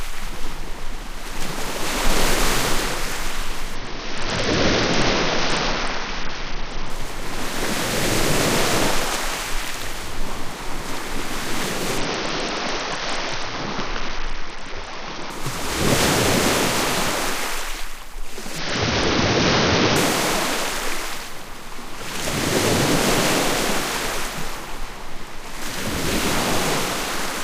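Bluetooth SBC bit pool drops at 3.75–6.90 s, 11.98–15.30 s and 18.58–19.96 s starve the top sub-bands, consistent with about 66 kbps, so the treble dulls and gritty noise rises.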